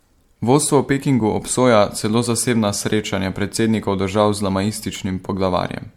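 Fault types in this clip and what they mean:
Generation loss, throughout: the speech sounds swirly, smeared and hollow, with blurred attacks and nothing above 19.9 kHz, likely from around seven repeated MP3 passes at what sounds like 96 kbit/s, each requantising on a shifted frame grid so artefacts accumulate.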